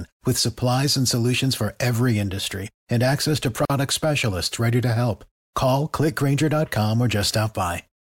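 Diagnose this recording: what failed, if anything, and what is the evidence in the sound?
Codec: 45 ms gap at a join of encoded pieces at 3.65 s, after "industry and access to", from untrimmed encoder delay and padding.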